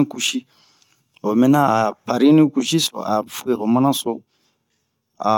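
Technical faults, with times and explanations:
No technical faults can be heard in this speech recording. There is nothing here to time or explain.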